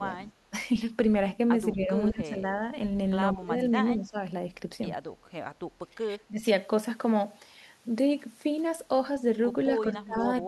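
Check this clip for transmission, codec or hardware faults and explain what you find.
Seven short dips in the speech sound like speech suppressed in double talk: at 0.0 to 0.3 s, 1.73 to 1.9 s, 2.1 to 2.47 s, 3.34 to 3.76 s, 3.94 to 4.16 s, 6.05 to 6.45 s and 9.87 to 10.28 s. The talker's level sinks for a few hundred milliseconds, gently near 1.8 s and by about 20 dB at the deepest. This is likely an echo canceller clamping down while the far end spoke.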